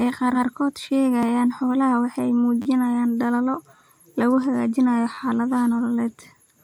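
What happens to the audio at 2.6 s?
A repeated buffer fault occurs from 2.62 to 2.66 s. New audio arrived late, so the same short slice, which fits a 10 ms buffer, replays four extra times with a hard join at each repeat. It comes across as a brief buzz, with little or no audio lost.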